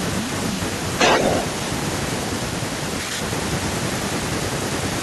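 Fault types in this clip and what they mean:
Speech suppressed in double talk: The speech dips, thins or breaks up in four places, at 0.08–0.38 s, 2.56–3.83 s, 4.06–4.53 s and briefly at 4.96–5.01 s. The drops reach about 10 to 20 dB, and the longest spans roughly a second. The likely cause is an echo canceller that could not tell this talker apart from loudspeaker echo while both sides spoke at once, so it turned both down.
Echo leak: Between 0.98 and 1.45 s a delayed copy of the speech trails the original by 216 ms, sitting roughly 10 dB below it. This is likely an echo canceller on a loudspeaker-equipped end failing to remove everything its microphone picked up, so part of the played-back audio was sent back down the line.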